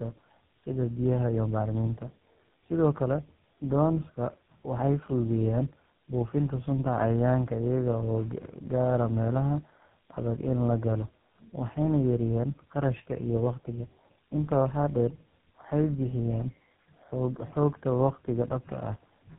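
Throughout, tandem speech coding leaves the speech rougher and more warbly than one codec could, with nothing above 3.8 kHz. That fits three chained speech coders, each recoding degraded output.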